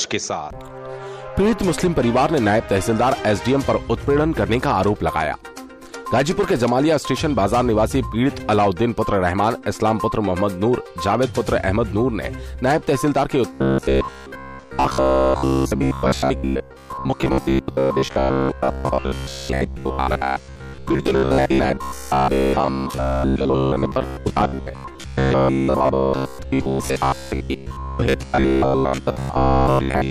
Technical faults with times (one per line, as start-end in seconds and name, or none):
13.53-30.10 robotic sound from repeated short buffers